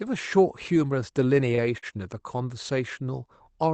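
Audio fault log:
1.55–1.60 s and 1.78–1.85 s: short stall from a late packet. Each time a packet arrived late, the jitter buffer ran dry and the receiver held the preceding sound for about 25 ms, then 46 ms, before resuming where it left off. Nothing is lost, but the sound briefly lingers with a faint buzz or dip, and the playout delay grows by those amounts.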